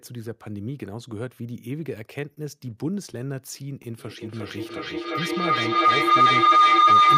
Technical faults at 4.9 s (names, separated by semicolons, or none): feedback howl